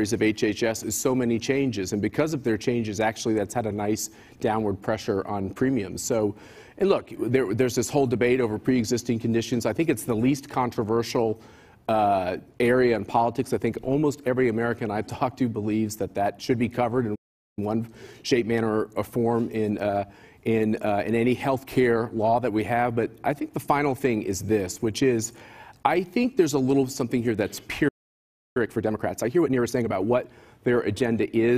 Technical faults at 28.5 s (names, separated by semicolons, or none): playback stall; time-compressed catch-up